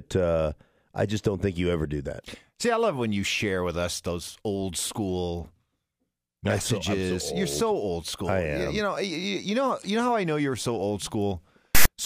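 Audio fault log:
11.75–11.86 s, file tags played as audio: a hard-edged burst of loud, rasping static, lopsided toward one polarity because text bytes are read as samples, then dead silence from zero padding. Its abrupt edges and the rasp-then-nothing shape set it apart from clipping or a codec dropout.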